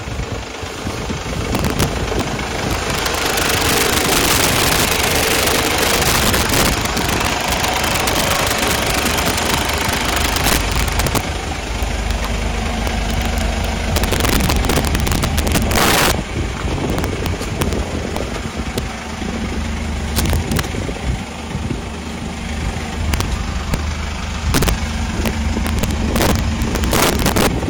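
Violent, sharp cracks break out on the loudest moments across the whole clip, far harsher than ordinary clipping. This is integer overflow: the signal was pushed about 17 dB past full scale, and instead of being held at the limit, each peak that exceeded the largest integer value wrapped around to the opposite extreme. Only around 2 percent of samples go over, so the sound is punctured by sudden full-range jumps rather than steadily distorted.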